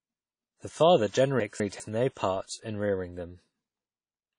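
Low-bitrate audio saved at a high bitrate, throughout: the speech stops dead at 10.1 kHz and has the smeared, swirly texture of heavy compression. This is likely an earlier low-bitrate encode, around 32 kbit/s, re-saved as a large MP3 that cannot restore the detail already stripped away.

Chunks out of order, from 1.4 to 1.8 s, just before "no part in rearing": a 200 ms chunk plays one chunk late, after the one that should follow it. The passage sounds briefly jumbled, with three hard joins where the waveform jumps.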